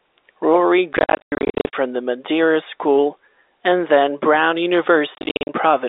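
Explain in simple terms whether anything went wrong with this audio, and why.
Packet loss filled with silence breaks up the speech twice. From 0.93 to 1.73 s, about two thirds of that stretch drops out as short holes, the longest 100 ms. From 5.15 to 5.49 s it happens again, with gaps up to 50 ms. Pieces of the signal never arrived, and the receiver played silence in their place. The holes start and stop abruptly, and their lengths point to packets of 10 ms each. Behind this, the narrow telephone-line sound of G.711 coding is ordinary for a phone call.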